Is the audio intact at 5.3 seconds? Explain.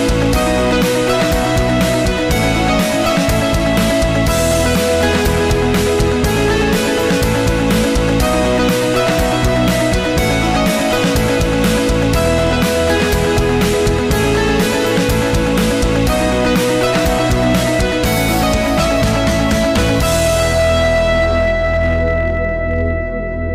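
No. Hard clipping is present at 5.3 seconds, as it is across the whole recording. The signal is driven about 6 dB beyond what one stage in the chain can pass, so every peak that exceeds that ceiling is sliced flat, and roughly one sample in fourteen sits at the limit. Those squared-off tops generate harmonics high in the spectrum, heard as distortion on the peaks.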